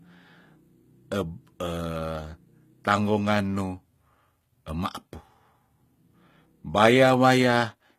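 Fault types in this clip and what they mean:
HE-AAC compression: The treble sounds synthetic, with gritty, lispy s sounds and nothing above 14.9 kHz. This is likely HE-AAC at a very low bitrate, around 20 kbps, rebuilding the upper band from copied lower bands, so its harmonics no longer line up.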